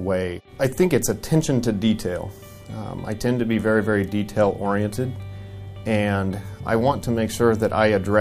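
Nothing technically wrong is audible anywhere in the audio.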